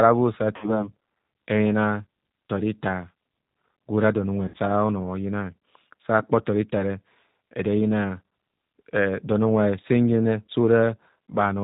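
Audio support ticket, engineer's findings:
G.729 codec, whole clip: band-limited speech, nothing above 4 kHz, rough synthetic edge on voiced sounds. Consistent with G.729A at 8 kbit/s pulse-coded excitation. Unlike plain low-pass filtering, the texture itself is coarse, not just dull.

VoIP packet loss concealed by the speech codec: 0.56–0.88 s; 4.48–4.57 s, between "don unwe" and "ora ono"; 8.29 s. Stretched, fading sound, then weak recovery. Fits 60, 60 and 30 ms lost. Unlike dropouts, no silence: decoder extrapolates pitch and filter.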